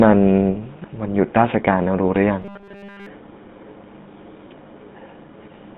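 From start to end the speech carries the buzzy, gravelly roughness of the GSM full-rate codec. The band runs from about 150 Hz to 3.6 kHz, and the grain fits a 13 kbps full-rate stream. Its damage is plainly audible. The codec rebuilds the voice from a vocal-tract model driven by a sparse, regularly spaced pulse train, and that coarse excitation causes the grit. A plain telephone band-limit would muffle the sound without making it rough.

From 0.54 to 0.57 s there is a short lost GSM frame. This stretch sounds like a single missing 20 ms frame. The decoder fills the gap by reusing the last good frame's parameters, so the sound briefly freezes into a rough, metallic ring instead of dropping to silence or clicking. It is too short to fade out fully, and that sets it apart from a longer dropout.

From 2.42 to 3.06 s the speech turns into robotic sound from repeated short buffers. A rigid, metallic buzz locked at 200 Hz covers essentially the whole stretch and still roughly tracks the speech. 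The likely cause is audio arriving too seldom, with the player looping a very short chunk to fill the time, which fits a 5 ms buffer since the loop rate sets the pitch. A lost frame instead rings once and decays, but this buzz holds one fixed pitch for well over half a second.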